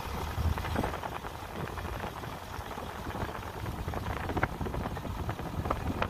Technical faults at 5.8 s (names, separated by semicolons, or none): none